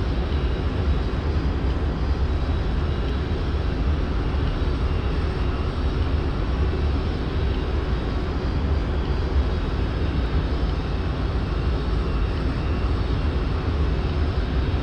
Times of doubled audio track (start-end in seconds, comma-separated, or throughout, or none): none